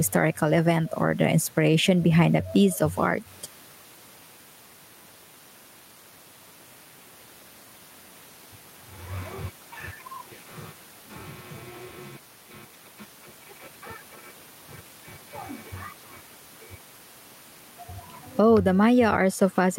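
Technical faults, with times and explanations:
Throughout, gain pumping: the gain swings by roughly 10 dB, likely excessive gain clamped by a fast limiter.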